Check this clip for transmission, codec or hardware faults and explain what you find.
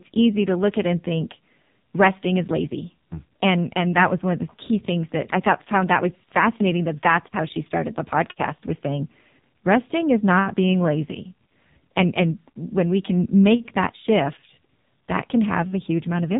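One codec fault runs through the whole recording. The speech sounds boxed-in and buzzy, with a synthetic, reedy edge and nothing above about 3.8 kHz, so sibilants lose their hiss and the voice turns thin and phone-like. That is AMR narrowband mobile codec damage, and heavy. The codec samples at 8 kHz and rebuilds speech from a vocal-tract model excited by sparse pulses in each 5 ms. The coarseness fits one of its low modes, near 5.9 kbps.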